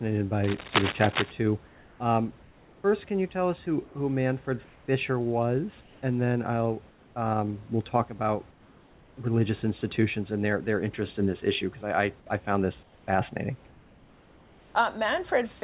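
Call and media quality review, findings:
Cable scratch noise, 0.44 to 1.31 s: rough scratchy bursts sitting just under the speech. Likely a worn cable or connector being moved, its contact flickering.

Comfort noise in place of the background at 1.67–2.0, 3.86–3.95, 5.81–6.02, 6.89–7.16, 8.51–9.17, 12.83–13.07 and 13.67–14.75 s: the room tone goes flat and featureless, mostly a few dB quieter. Likely the sender's silence suppression stopping and the receiver filling the gaps with synthetic noise.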